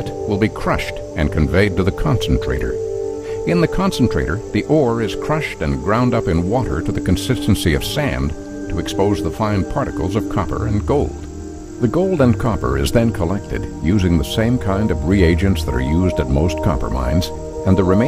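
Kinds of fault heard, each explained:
No faults can be heard; the signal stays continuous throughout.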